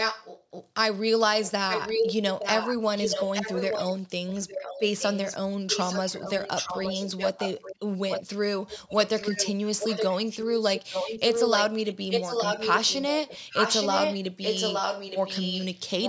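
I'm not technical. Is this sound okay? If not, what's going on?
No. The speech has an echo leak: a second copy of the voice repeats almost a second (870 ms) later. The likely cause is a caller on a loudspeaker whose echo cancelling let it through. Unlike room echo, which sounds like a blurred tail, this is a separate repeat. It appears at 0.0–0.44, 1.45–3.87, 4.27–5.36, 5.7–7.76, 8.09–8.23, 8.68–10.44 and 10.75 s to the end. It is sometimes as loud as the speech and sometimes quieter.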